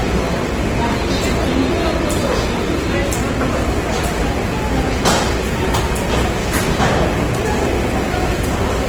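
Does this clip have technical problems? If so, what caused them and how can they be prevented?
Yes, two. All the way through, the sound has a rough, grainy texture, with tones breaking into noise rather than swirling. The top end still reaches about 20.2 kHz, so this is full-bandwidth damage, not muffling. That's the signature of Opus compression in its music (CELT) mode, likely at a starved bitrate that fits something around 16 kbps: band energies are kept, but the detail inside them gets filled with folded or noisy content. To prevent it, encode at a higher bitrate or keep an uncompressed master.

Then from 5.68 s to 8.67 s there's a hard, raspy GSM phone buzz at 217 Hz, full of harmonics and sitting about 24 dB under the sound. It is nearly steady, which points to a phone on an active call. The handset's transmit bursts were picked up and rectified by the audio circuitry, turning radio pulses into an audible buzz that has nothing to do with the program. 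Keep phones off or well away from the mics, cables and interfaces while recording.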